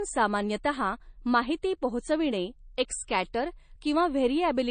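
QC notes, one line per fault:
Throughout: low-bitrate audio saved at a high bitrate. The speech stops dead above 9.1 kHz and sounds dull. This likely fits an MP3 first encoded near 32 kbit/s, then re-saved near 320 kbit/s. The larger file cannot restore the lost band.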